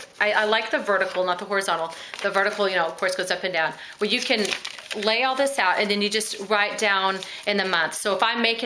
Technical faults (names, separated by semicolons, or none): none